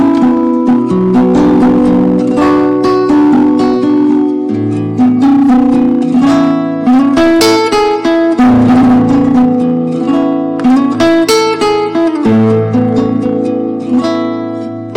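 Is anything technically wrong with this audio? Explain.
Yes. Hard clipping runs throughout. The signal is driven about 16 dB past what the stage can pass, so roughly 15% of samples are flattened, giving harsh fuzz.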